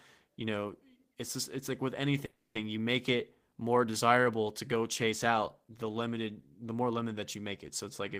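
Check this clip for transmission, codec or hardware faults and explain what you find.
One transmission fault stands out: a call audio freeze from 2.25 to 2.57 s. Packets were likely held up in transit and the jitter buffer ran empty, so the receiver stretched the last sound it had into a fading buzz or hiss, then fell silent for about 160 ms. When the packets arrived, the speech resumed exactly where it broke off. Nothing is lost, but everything after that point runs about 300 ms late.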